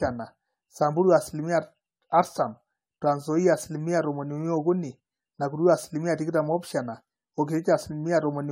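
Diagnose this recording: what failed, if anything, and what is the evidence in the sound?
Throughout, the speech sounds swirly, smeared and hollow, with blurred consonant onsets and nothing above 16.9 kHz. This is generation loss at the codec stage, likely from about seven AAC-LC passes near 96 kbit/s. Each re-encode requantises on a shifted frame grid, compounding noise and spectral holes.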